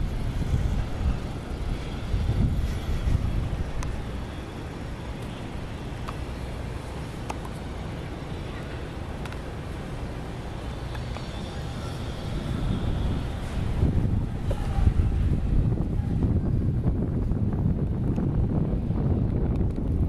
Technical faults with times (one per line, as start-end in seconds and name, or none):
6.55 compressed frames skipped
9.67 compressed frames skipped